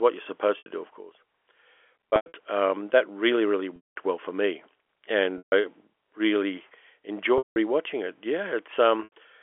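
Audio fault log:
0.58 s, 2.10 s, 3.76 s, 5.38 s, 7.38 s, 9.04 s: packet loss with pitch repetition. The sound briefly holds a buzzy, frozen tone, first after "what you're", then before "um that really really" and after it. Gaps last 80 to 200 ms (the 2.10 s loss is scattered over 240 ms), fitting 20 ms packets. The receiver loops the last pitch period, fading longer gaps toward silence, over band-limited telephone audio.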